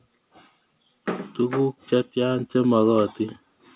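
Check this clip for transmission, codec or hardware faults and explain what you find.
One fault stands out: automatic gain rising, from 0.91 s to 3.11 s. Over those two seconds or so the level climbs by about 5 dB, and the voice and the background noise floor swell together rather than the speech alone getting louder. That shared rise is the signature of an automatic gain control that judged the input too quiet and slowly increased its amplification. Because the change is spread over more than a second, it sounds like a gradual drift upward, not a step. The call path is audible as a hard band limit with nothing above 4 kHz, which fits a narrowband G.711 A-law codec at 64 kbps.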